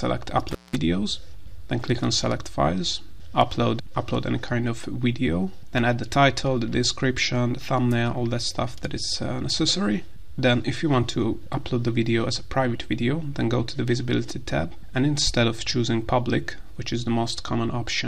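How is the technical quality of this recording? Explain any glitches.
The recording has one glitch near the start. From 0.51 to 0.76 s there is an intermittent contact fault. A loose cable or plug briefly loses its connection. The signal path opens for about 189 ms, so the sound drops out abruptly. Crackle marks both edges as the contact scrapes open and then closes again. During the gap faint hiss remains.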